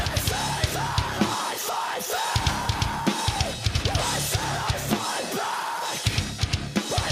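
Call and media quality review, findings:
Gain pumping throughout: input gain likely far too high, fast limiter clamping on each loud sound. Gain swings roughly 5 dB under peaks, dynamics squashed.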